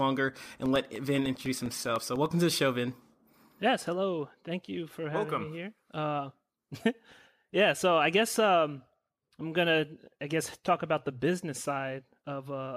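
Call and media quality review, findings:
Regular ticking over the speech, 0.46–2.26 s, one tick every 0.1 s, roughly twenty in all, audible only under signal. Periodic USB or driver dropouts: something stalls the USB bus or audio driver on a fixed 100 ms cycle, dropping about 1 ms of audio each time and leaving silence in its place. Suspect a background task on the capture host.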